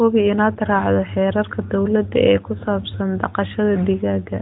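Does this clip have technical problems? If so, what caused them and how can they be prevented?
No, this clip does not have technical problems.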